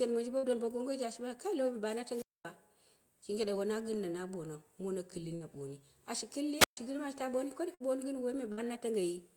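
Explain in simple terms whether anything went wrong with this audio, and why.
Two things went wrong. First, four bursts of packet loss: small chunks of the audio stream were lost or arrived too late, at 0.37 to 0.46 s, 5.35 to 5.43 s, 7.74 to 7.83 s and 8.52 to 8.66 s. Each time, about 60 ms of speech never arrived. The receiver stretched the last sound for roughly 55 ms while fading it, so you hear a brief held buzz or hiss, then the voice jumps ahead with a bit missing.

Second, two wireless microphone squelch dropouts: the radio signal from the microphone weakened so much that the receiver muted itself to avoid blasting static. This happens at 2.07 to 2.52 s and at 6.58 to 6.77 s. Each is heard as a short rise of hiss, then a hole of near silence, about 230 ms and 130 ms long, before the voice comes back.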